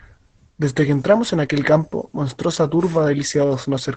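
Opus voice compression runs through the whole of this short speech clip, and the damage is plainly audible. Nothing is present above about 8.6 kHz, so the top octave of sibilance and air is gone and the voice sounds muffled. The remaining band is coded by the SILK linear-prediction layer at a rate consistent with about 12 kbps in wideband mode, and the coarse excitation coding at that rate leaves the speech hoarse and slightly robotic.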